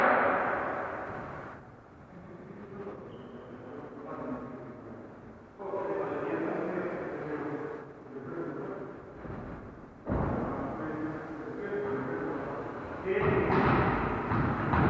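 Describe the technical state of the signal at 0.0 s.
At 0.0 s the signal is intact, with no dropout, clipping, glitch or other fault audible at that moment.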